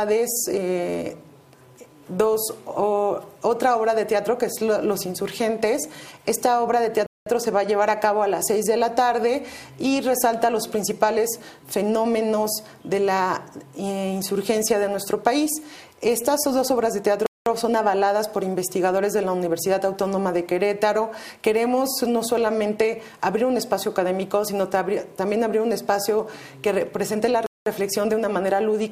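At 7.06, 17.26 and 27.46 s the sound drops out for 200 ms each time, a gap between chunks repeating every 10 s. The audio was joined from 10-second pieces with silence inserted at each seam, so nothing is lost, but the flow stops abruptly. It is heard as brief dead holes with hard edges. On a waveform each is a near-silent flat stretch with sheer walls. A spectrogram shows blank vertical bands across all frequencies.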